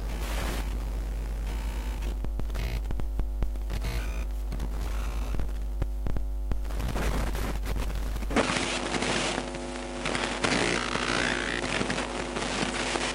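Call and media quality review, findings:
Sound turns duller and boxier from 8.36 s to the end, with no gap at the change. Likely input switched to a poorer device, one with a narrower passband and its own coloration and noise floor. Spectrogram: content above 10.5 kHz disappears at 8.36 s, leaving a flat ceiling, and a new steady noise band sits roughly 35 dB under the signal. Waveform: a step in level of about 5 dB at the switch point.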